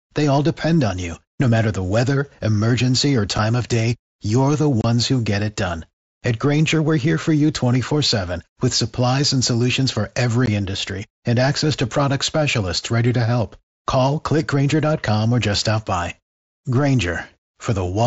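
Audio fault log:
3.38 s, 4.81–4.84 s and 10.46 s: unconcealed Bluetooth headset packet loss. Lost voice packets between headset and phone were replaced by silence instead of being masked. This leaves abrupt holes of 7.5, 30 and 15 ms in the wideband mSBC speech, first just after "the weather emergency or".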